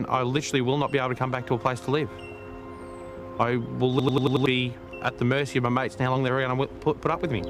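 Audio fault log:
3.99–4.46 s system hang loop: one 92.9 ms block repeats five times at 10.8 Hz, a machine-gun stutter fitting a 4096-sample buffer; identical repeating stripes on spectrogram, about half a second lost.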